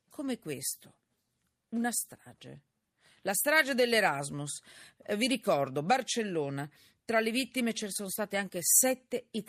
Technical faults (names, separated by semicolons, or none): none